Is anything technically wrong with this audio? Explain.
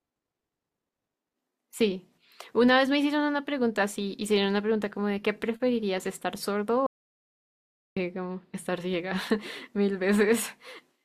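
Yes. The speech contains an audio dropout to silence from 6.87 s to 7.97 s, losing about 1.1 s of material. The input signal was likely cut off at the source, through a disconnected device, a failed link or a stray mute, while recording carried on writing silence. The speech stops abruptly mid-flow, with no room tone underneath, and resumes just as suddenly. On a waveform this shows as a flat line; on a spectrogram, a solid blank band across all frequencies.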